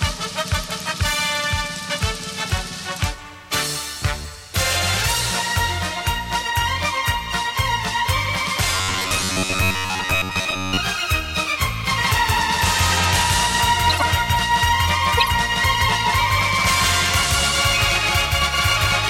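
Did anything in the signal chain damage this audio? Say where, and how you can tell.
Yes. From 8.75 to 10.78 s there is robotic sound from repeated short buffers: the audio collapses into a rigid, metallic buzz pitched near 93.8 Hz that only loosely tracks the material underneath. The stage is likely the driver or buffer layer. New audio is arriving too seldom, so a short stretch gets replayed over and over while most of the real audio is skipped. A period of 1/93.8 Hz fits a buffer of roughly 10.7 ms.

A doubled audio track starts abruptly at 11.92 s and runs to the end of the clip. A second full-band copy sits about 150 ms behind the original at roughly the same level, with no decay or room colouring. That points to a duplicated path at capture or in the edit, which is likely the cause: the same signal gets mixed in twice, offset by a fixed delay, so every event is heard as a dry slapback.

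Corrupt frames were decoded at 13.90 to 14.03 s and again at 15.17 to 15.31 s. Each is a brief burst of misplaced energy about 130 ms long, which fits several consecutive damaged frames. This happens at the codec stage. Flipped bits in the compressed data were decoded anyway, so the wrong gains or misread codes put energy at frequencies where it does not belong for the span of the bad frames.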